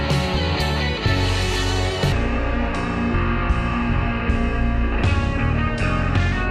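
From 2.12 s to the end, the audio drops into a section at the wrong speed. It plays at about 0.63 times normal speed, so everything turns slow and deep, roughly seven semitones down. That's likely a chunk played back against the wrong clock.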